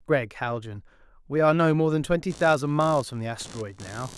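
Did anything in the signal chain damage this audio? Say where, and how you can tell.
Yes. From 2.30 s to the end, computer activity noise enters at the analogue stage. A buzzy chirping pulses around 70 times a second, roughly 20 dB below the speech, independent of it. Processor or graphics load is disturbing the shared ground. A spectrogram shows evenly spaced vertical striations.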